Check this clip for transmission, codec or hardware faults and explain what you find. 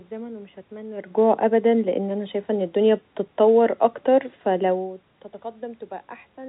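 No transmission, codec or hardware faults are audible here.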